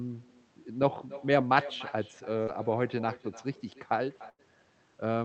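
From start to finish the speech carries an echo with no canceller. The far end replays the call through a loudspeaker, its microphone captures it, and nothing subtracts it. The result is a quieter copy, about 16 dB below the direct signal, trailing each phrase by roughly a third of a second. It sounds thinner than the original. This repeat sits within the call codec's band limit at 8 kHz, which points to an Opus wideband path.

At 2.43 to 2.49 s there is short concealed packet loss. About 40 ms of audio failed to reach the decoder in time, and the receiver synthesised 38 ms to bridge it. It extended the preceding sound and then cross-faded back into the real signal. The repair is audible as a brief smear or wobble in the speech at that point rather than a hard dropout.

At 4.29 to 4.41 s a longer burst of packet loss occurs, with about 100 ms missing and 94 ms filled by concealment. Over a gap this long, the decoder keeps extrapolating the last sound and attenuates it as it goes. 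The result is a held buzz or decaying hiss. The speech then resumes further along, and the content that fell inside the gap is simply gone.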